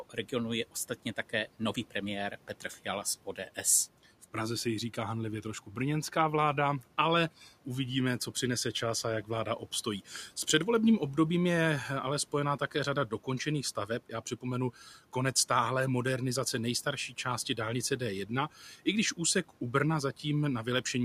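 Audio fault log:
0.10–0.31 s, speech cut by the noise suppressor: right at the start, the suppressor mistook the opening of the speech for background and pulled it down along with the room noise, which sits about 23 dB below the speech. The gain dips by up to about 8 dB over roughly a tenth of a second in total, so the first soft sounds come across thinned and partly swallowed before the level recovers.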